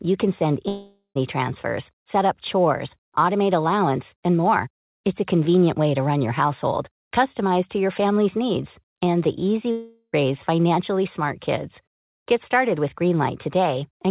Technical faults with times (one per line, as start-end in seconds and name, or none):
0.68-1.17 long network dropout
9.71-10.14 long network dropout